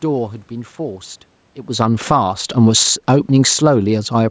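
A short piece of speech where the automatic gain falling is the problem: from about 1.66 s to 4.26 s the level sinks by about 8 dB, and the room noise drops right along with the voice, which gives away that the gain control decided the input was too hot or too noisy and pulled its gain down. There's also a level shift around a second and a half that sounds like the talker moving, and the call microphone processing tops out at 8 kHz.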